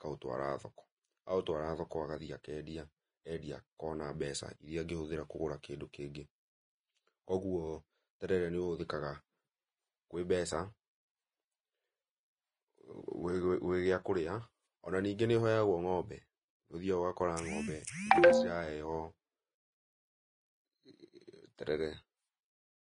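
Throughout the speech there is a hissy, grainy texture, with roughened tones, smeared consonant attacks, and nothing above 10.6 kHz. This is likely Vorbis compression at a low setting, consistent with roughly 24.6 kbps, where coarsely quantised treble detail turns into noise.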